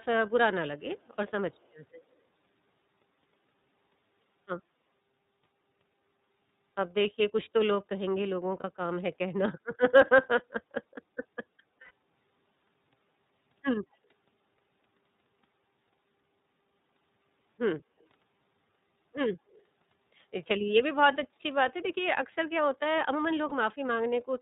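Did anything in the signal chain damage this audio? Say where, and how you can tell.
Yes. At the codec stage, the whole clip has been through iLBC. Everything above 4 kHz is gone, so the speech sounds narrowband, and the damage is plainly audible: a slightly rough, synthetic edge to the speech. That texture comes from iLBC coding each frame's excitation on its own at a low rate. The character fits the 13.33 kbps mode with 30 ms frames rather than the 20 ms one.

Call processing adds an echo leak in four short spots: 0.97–1.16 s, 1.52–1.68 s, 17.99–18.06 s and 19.50–19.62 s. Each is a faint trailing copy of the speech about 150 to 170 ms late. It sits around 40 dB below the voice, and the 19.5 s one is a touch louder at roughly 35 dB down. That's most likely a far-end speakerphone whose echo canceller didn't fully remove the pickup and sent scraps back.

On the network side, there are lost iLBC frames at 8.60–8.65 s, 11.81–11.91 s and 23.49–23.53 s. 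Each gap is filled by a held, faintly buzzy vowel-like sound where the decoder repeats the last pitch cycle mixed with noise. The 11.8 s one lasts about 90 ms, which fits three consecutive frames, and the other two fit single 30 ms frames. Because iLBC frames don't depend on earlier ones, the speech snaps back cleanly right after each gap.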